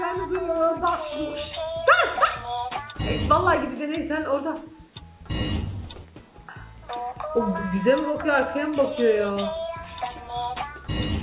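Nothing stood out on listening; the audio comes through a G.711 A-law call path at 64 kbps, with nothing above 4 kHz as expected for that codec.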